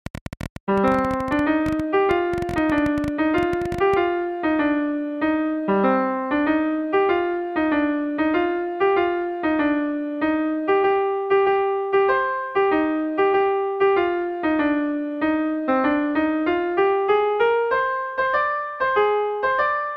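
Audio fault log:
0.06–3.95 s: train of clicks, around 50 same-shaped pops at 12.1 per second, unevenly paced, about 5 dB over the sound. Unlike random crackle, they repeat; likely interference.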